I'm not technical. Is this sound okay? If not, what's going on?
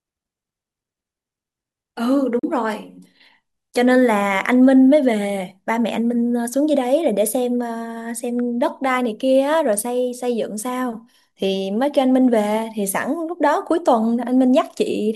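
No. At about 2.39 to 2.44 s the speech briefly cuts to silence, likely a Bluetooth dropout. Unlike a stall, it resumes later on, as though it kept playing.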